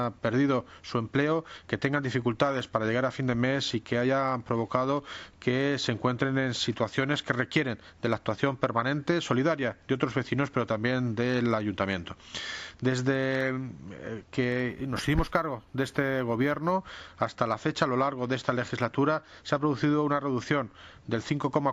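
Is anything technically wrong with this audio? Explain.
Yes. From 14.69 to 16.72 s there is imaging from linear upsampling. The sound points to a 16 kHz source raised to 48 kHz by straight-line interpolation between samples, which filters poorly. The top of the original band is dulled, and a mirrored copy of the spectrum remains between 8 kHz and 16 kHz, roughly 30 dB below the signal. It is heard as a faint metallic shimmer on sibilant and high-pitched content.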